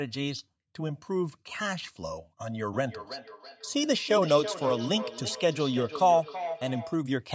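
Speech with a trailing, ringing echo from 2.72 s to 7.06 s: each stretch of sound returns roughly every third of a second, thinner each pass and peaking about 10 dB below the speech. This is feedback echo between two devices, where a nearby device replays the call and this microphone captures it again. The call microphone processing limits the band to 8 kHz.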